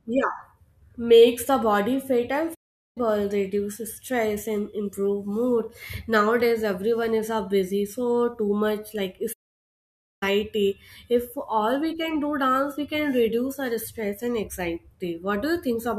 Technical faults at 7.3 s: none

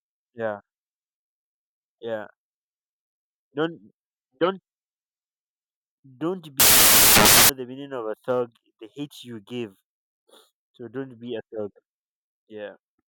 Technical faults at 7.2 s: samples built from the wrong bytes

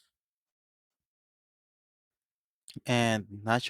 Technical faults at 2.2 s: none

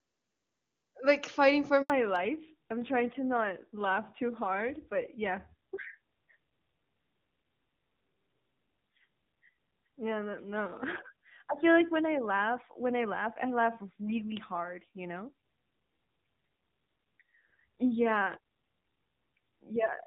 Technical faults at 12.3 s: fallback to narrowband

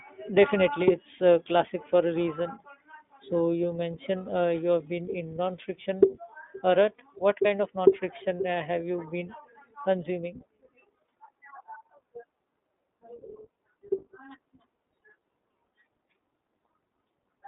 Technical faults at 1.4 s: iLBC codec

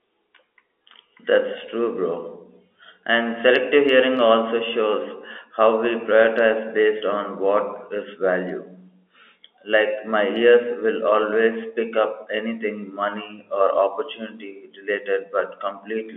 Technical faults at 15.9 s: none

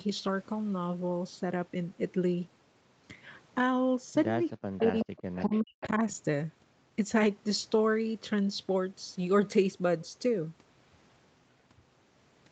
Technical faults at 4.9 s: speech suppressed in double talk; echo leak

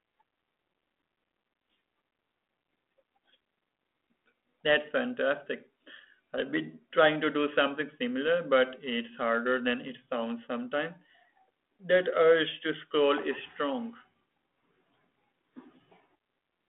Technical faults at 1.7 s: none

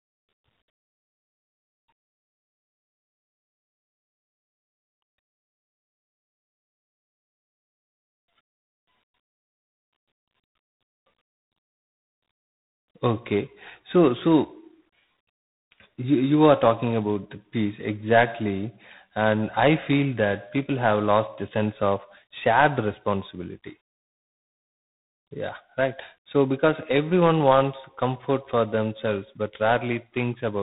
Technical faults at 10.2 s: tandem speech coding

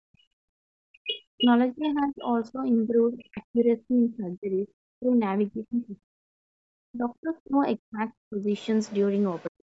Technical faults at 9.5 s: Bluetooth LC3 compression; other side's voice leaking through; speech suppressed in double talk

